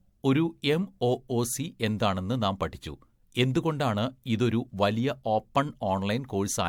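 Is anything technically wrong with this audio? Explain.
Yes, throughout this speech clip there is generation loss: a swirly, smeared, hollow quality with blurred attacks. It likely comes from repeated MP3 re-encoding, around seven passes near 112 kbit/s, each quantising on a shifted grid. A single encode at that rate, with content reaching 20.1 kHz, wouldn't sound this degraded.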